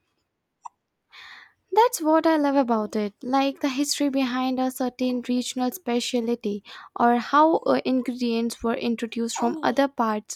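Nothing stood out on listening to this speech recording.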